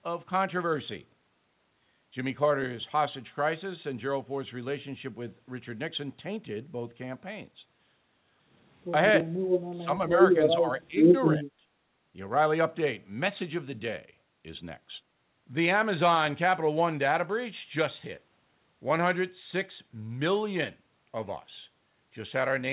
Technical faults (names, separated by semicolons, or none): speech suppressed in double talk